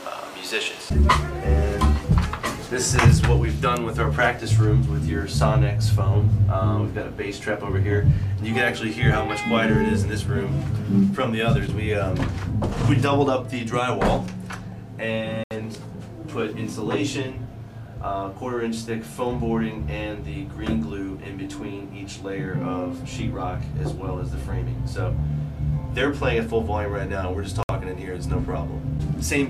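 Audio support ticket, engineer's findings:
Bluetooth stall, two dropouts to silence: 15.44–15.51 s (73 ms), 27.63–27.69 s (62 ms). Likely wireless link: delayed packets starved headphone buffer. Waveform shows flat gaps; spectrogram, full-band vertical blank strips.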